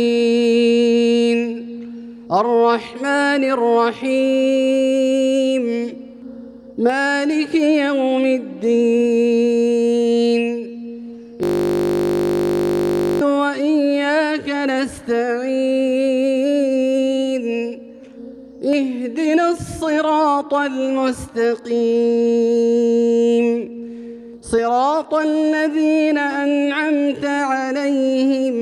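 From 11.43 to 13.21 s, a system hang loop repeats one 20 ms slice, as if the audio hardware kept replaying a stalled ring buffer, producing a steady 50 Hz buzz.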